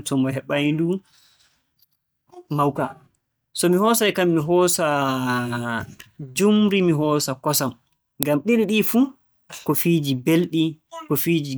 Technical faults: uninitialised buffer

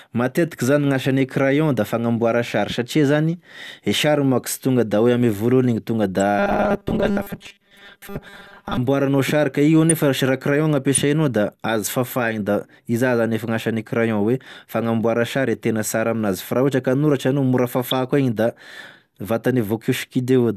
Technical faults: robotic sound from repeated short buffers; corrupt frame decoded

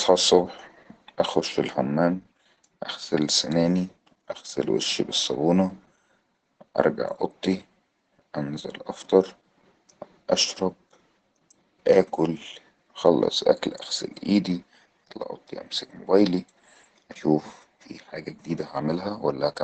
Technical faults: Opus voice compression

